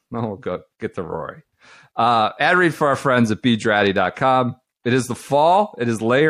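MP3 compression damage runs through the whole clip: the speech sounds watery and swirly, with s sounds turned metallic. This is likely a low-bitrate MP3 encoder, consistent with about 64 kbps, zeroing weak frequency lines that flicker between frames.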